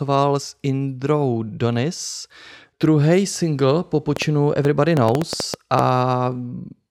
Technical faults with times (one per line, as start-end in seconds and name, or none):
4.16-5.80 train of clicks